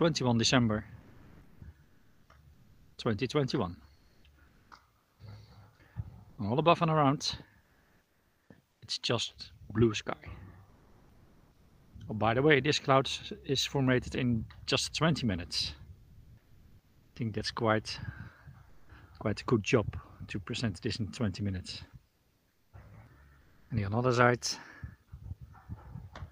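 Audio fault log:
1.01–1.61 s, sound dropped by the voice detector: about 0.46 s of real sound vanishes into steady noise for 0.6 s before returning. The sender's voice detector misjudged that stretch of sound as background and stopped sending, likely Opus DTX kicking in.
1.01–8.81 s, 10.69–11.93 s, 15.97–17.15 s, 18.69–18.89 s, 22.07–23.69 s, comfort noise in place of the background: in the pauses the real background becomes flat, featureless hiss, about 5 dB quieter around 10.7 and 18.7 s and about 1 dB louder near 16 s. With transmission paused, the receiver synthesises filler noise, likely via Opus DTX.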